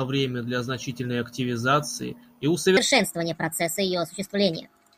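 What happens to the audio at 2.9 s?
At 2.9 s the speech is inside a wrong sample rate fault that runs from 2.77 s, just after "для значительной активизации и", to the end of the clip. The samples play without conversion at a faster rate than they were recorded. A speed-up of 1.38 times fits 32 kHz audio played at 44.1 kHz. Pitch rises by about 5.5 semitones, so the voice sounds high and hurried. On a spectrogram, the harmonics and formants shift upward. In the waveform, syllables look compressed in time.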